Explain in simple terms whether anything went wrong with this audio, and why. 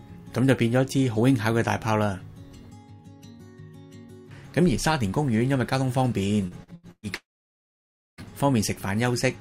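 Repeated packet loss (robotic sound) runs from 6.47 to 7.06 s. Four chunks of the sound went missing in quick succession, the longest about 0.12 s. Each hole was patched by stretching the previous sound, so nearly half of this stretch is filler, and it comes out choppy and robotic.

Long network dropout, from 7.15 to 8.21 s: the sound briefly carries on as a fading buzz, then goes almost completely silent for nearly a second. It returns with that piece simply gone. This likely happened because the connection stopped delivering audio for about a second.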